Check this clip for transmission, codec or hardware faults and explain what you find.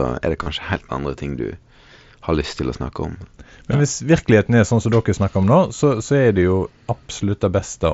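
Concealed Bluetooth headset packet loss occurs three times: 0.43 to 0.46 s, about 30 ms, which fits four lost frames; 3.19 s, a single frame; and 5.42 s, about 15 ms. Voice packets between headset and phone went missing, and the receiver filled each gap by repeating the closest-matching recent stretch of waveform. The single-frame loss is nearly hidden. The longer patches sound briefly buzzy at steady level, with a slight warble as the real speech resumes. The wideband mSBC link carrying the speech gives a faint graininess on louder moments.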